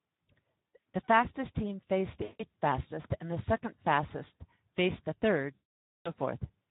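Speex codec coding runs through the whole of this speech recording at a rate that fits roughly 11 kbps. With so few bits left for the excitation signal, the voice comes out plainly hoarse and noisy, and any upper-band detail is only shaped noise fill. VoIP packet loss concealed by the speech codec occurs at 0.75 s, from 2.23 to 2.43 s just after "fastest team faced", and from 5.55 to 6.10 s just after "faced the". At 0.75 s about 100 ms of audio is missing, scattered over 160 ms with the longest gap about 60 ms. The other two gaps cover about 160 ms and 520 ms. In each gap the decoder keeps repeating its last pitch and filter at falling gain, so the sound smears into a fading buzzy or coloured tone. Because each frame builds on the one before, the voice stays weak and distorted briefly after the audio resumes.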